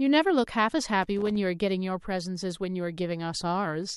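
A worn or dirty contact in the signal path made and broke intermittently from 1.02 to 1.36 s, a loose connector crackle lasting about a third of a second. Each time the contact opened, the speech signal was chopped off and then returned, and any DC present on the line jumped with it, adding pops. The result is an irregular, scratchy burst of crackle laid over the speech for that short stretch.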